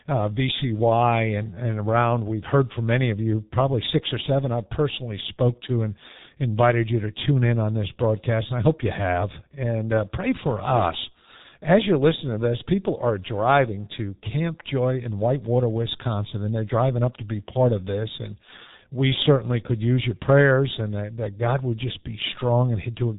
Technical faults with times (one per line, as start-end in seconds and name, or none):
0.00-23.19 G.723.1 codec